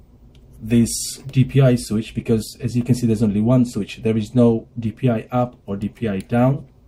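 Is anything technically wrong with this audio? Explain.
No, there is nothing technically wrong with this audio; the signal holds steady throughout with no audible faults.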